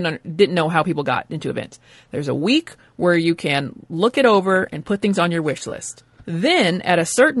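Across the whole clip the speech has a rough, grainy texture, with noise filling the gaps between harmonics and a thin, synthetic-sounding top band. The likely cause is low-delay AAC compression (AAC-ELD), whose short frames resolve pitch poorly, a plainly audible result that fits a low bitrate around 32 kbps.

From 5.69 to 5.72 s, right after "things on your wish", there is a brief smeared, noisy patch. This is AAC frame loss with concealment, consistent with a single dropped frame that the decoder patched by reusing and scrambling the previous spectrum.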